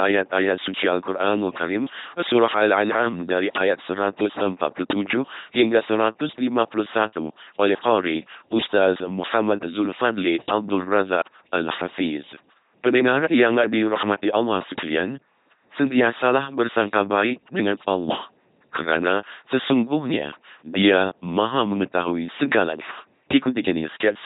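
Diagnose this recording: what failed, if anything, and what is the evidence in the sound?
What failed is the codec stage: the speech has been squeezed through an LPC-10 vocoder, and it sounds like it from start to finish. Every bit of it buzzes with that flat, mechanical robot quality, with hiss or buzz creeping in where the voiced/unvoiced call lands wrong, and nothing comes through above about 3.9 kHz. The heaviness of the damage fits a 2.4 kbit/s stream, where a small all-pole filter gets driven by either a pulse train or noise and nothing in between.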